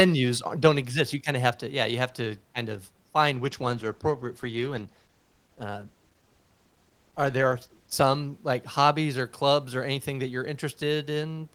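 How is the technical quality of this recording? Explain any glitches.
The recording has one clear glitch, a call bitrate drop from 3.32 s to 8.99 s, starting just after "to kind of f" and clearing before "or clubs or anything". The call's bandwidth estimate fell and the encoder was forced onto far fewer bits, consistent with a fall from 32 to 14 kbps, held at its lowest for 4.61 s. Coding that coarsely strips the high frequencies, so the speech turns muffled and rough, with a watery smear, until the bitrate recovers.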